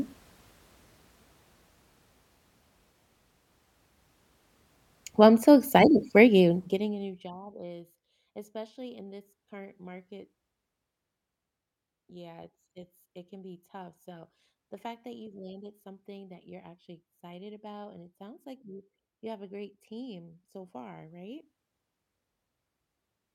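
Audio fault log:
6.35–7.46 s, zipper noise: a ticking buzz after "I'm so excited for" as the level falls roughly 25 dB in unsmoothed steps, about a hundred per second.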